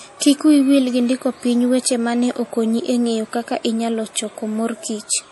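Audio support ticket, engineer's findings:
MP3 compression, throughout. Likely a low-bitrate MP3 encode upstream, starved of bits, so encoder drops treble and zeroes weak spectral lines. Hard cut-off at 11.5 kHz, dull top end on speech. Plainly audible watery, swirly texture as lines flicker frame to frame; fits roughly 48 kbps.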